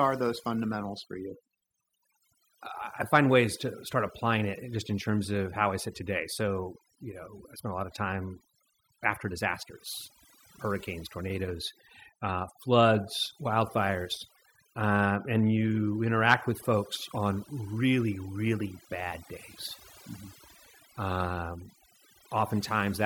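Across the whole clip the background drops and breaks up into twinkling specks: overdone noise removal, cutting frequency bands near its noise estimate along with quieter speech detail.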